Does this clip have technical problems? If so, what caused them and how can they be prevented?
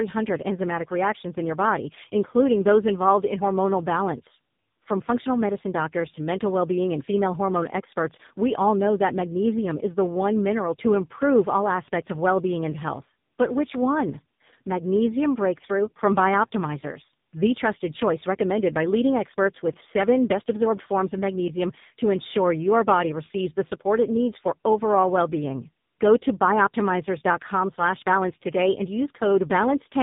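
Yes. Tandem speech coding runs through the whole clip: the speech is rough, muffled and warbly because it passed through two low-bitrate speech codecs in a row, with the second re-encoding the first one's already damaged output. The sound fits a GSM full-rate leg followed by AMR-NB at a low rate, with G.711 between them. On a spectrogram, nothing appears above 3.8 kHz, and the harmonics look smeared and blotchy rather than clean. Keeping the call on a single codec end to end, or using transcoder-free operation across links, prevents the repeated decode and re-encode.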